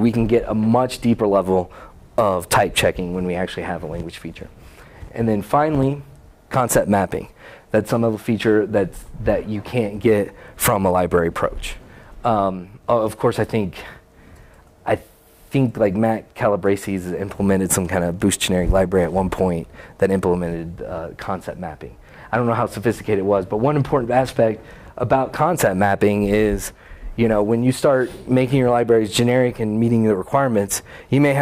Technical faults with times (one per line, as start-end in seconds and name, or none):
none